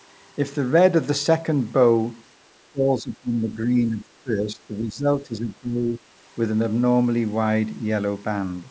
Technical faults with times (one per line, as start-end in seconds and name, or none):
2.62-6.02 speech suppressed in double talk